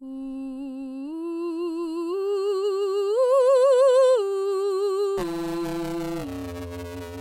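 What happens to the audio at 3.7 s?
Nothing goes wrong at 3.7 s: the music plays straight through that moment with no dropout, click, glitch or other audible fault.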